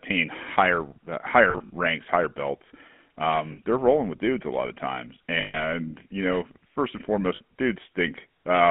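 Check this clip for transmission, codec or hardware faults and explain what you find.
Two faults are present: GSM full-rate coding across the whole speech clip, and four short bursts of lost GSM frames.

GSM full-rate codec, throughout: the speech is confined to a telephone band of roughly 200 Hz to 3.4 kHz, and the codec damage is plainly audible. The codec models the vocal tract and drives it with a thinned, regularly spaced pulse excitation. That gives a buzzy, gravelly texture consistent with a 13 kbps full-rate stream.

Lost GSM frames, at 1.5 to 1.70 s (between "higher uh" and "ranks higher belts"), 3.52 to 3.60 s, 5.40 to 5.64 s (between "a lot of times" and "you know first and"), and 7.36 to 7.41 s (just after "you know first and"): the decoder repeats the last good frame's parameters at decaying level. This produces a rough, metallic ring instead of speech. The first event has about 100 ms missing, scattered across 200 ms in runs no longer than around 40 ms.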